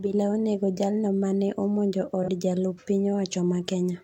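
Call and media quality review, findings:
AAC frame loss with concealment, 2.23–2.29 s, just after "jaal no mane omonjo". Decoder missing about 43 ms of data, consistent with a single dropped frame, filled from the last good spectrum. Brief smeared, noisy, phasey patch.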